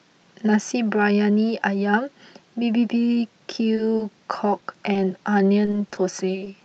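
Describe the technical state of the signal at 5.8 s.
At 5.8 s you're inside a stretch of repeated packet loss (robotic sound), 5.65 to 5.99 s: four short dropouts, each patched by extending the last sound, so it goes choppy and robotic.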